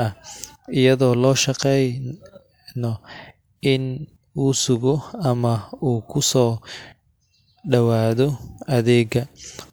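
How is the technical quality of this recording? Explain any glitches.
The speech recording is technically sound, with no glitches or other faults audible anywhere in the signal.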